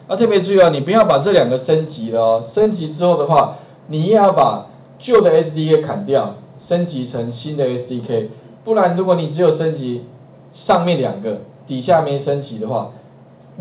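Around 2.63 to 2.69 s, a few tens of milliseconds of packets arrived too late for the decoder, and the receiver covered the gap with short concealed packet loss. It extended the preceding sound and then crossfaded back into the real signal, which leaves a brief smear or wobble where a short sound may simply drop out. The audio comes through a telephone-grade call path whose coding hiss and lack of content above 4 kHz fit G.711 mu-law at 64 kbps.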